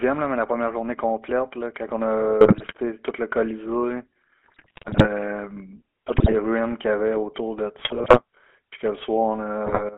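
Speech, carried through the GSM full-rate codec for the whole clip. The band is narrow, roughly 200 Hz to 3.4 kHz, with nothing above. The voice has a buzzy, gravelly edge that is plainly audible. That roughness comes from how the codec works. It models the vocal tract and feeds it a coarse pulse train, keeping only a third of the excitation detail. The sound fits a 13 kbps phone codec.

GSM bit errors break in five times: 2.41 to 2.73 s, 4.44 to 5.07 s, 6.08 to 6.35 s, 7.78 to 8.20 s, and 9.66 to 9.83 s. In each burst the voice turns to squawks, pops and gargling. Corrupted bits reach the decoder. Bad filter, pitch or gain values warp the spectrum or spike the level, frame by frame. The longest burst runs from about 4.4 to 5.1 s.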